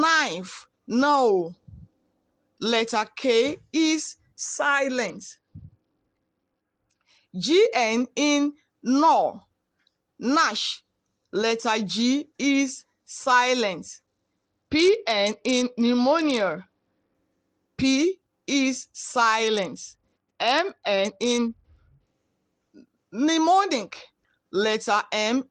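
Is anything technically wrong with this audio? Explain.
Yes. A Bluetooth SBC bit pool drop occurs three times: from 5.07 to 7.22 s, from 14.06 to 17.15 s, and from 19.47 to 22.14 s. Each time the treble dulls and gritty quantisation noise rises, which points to the bit pool falling from 31 to about 9, near 72 kbps, as the link struggled. Starved of bits, the upper sub-bands vanish and the rest turn coarse. Unlike a dropout, the sound never stops, and unlike a hands-free profile switch, full quality returns within seconds.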